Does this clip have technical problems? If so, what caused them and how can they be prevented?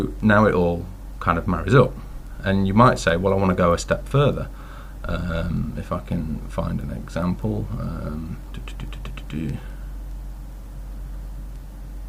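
Yes. Word clock ticks sound from 0.20 s to 11.97 s, roughly every fifth of a second. The receiving clock drifts against the sender's by around 100 ppm. Each slip drops or repeats one sample. Lock the receiver to the sender's word clock.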